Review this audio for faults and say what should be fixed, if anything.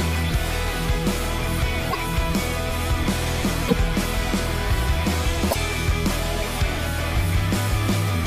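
Three short glitches occur, at 1.90 to 1.95 s, 3.67 to 3.73 s and 5.50 to 5.56 s. Each lasts about 56 ms, roughly two 26.1 ms frames. At each one the audio skips forward abruptly and the sound breaks up briefly. The likely cause is a broken MP3 bit reservoir. Frames were dropped, so the frames after each gap looked back for borrowed data and decoded bytes from the wrong frame. To prevent it, cut or stream the file only at frame boundaries with the reservoir intact, or re-encode without reservoir dependence.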